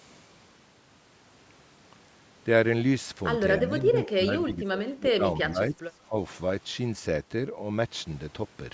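Speech dips and breaks up from 3.58 to 3.99 s and 4.15 to 6.16 s, by up to about 20 dB. This is likely speech suppressed in double talk.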